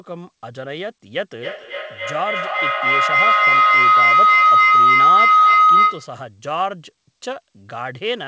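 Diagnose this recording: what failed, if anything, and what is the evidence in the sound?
Call-path feedback howl, 1.33 to 6.3 s. Loop gain above unity builds a tone near 1.5 kHz, repeating roughly every 300 ms, about 11 dB over speech.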